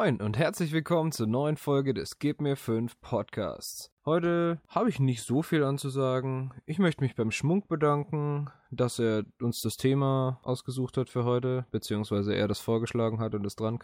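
No technical faults are audible.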